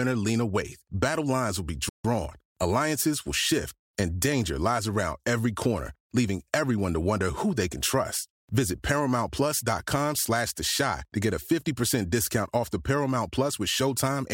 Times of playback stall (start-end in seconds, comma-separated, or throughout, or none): 1.89-2.05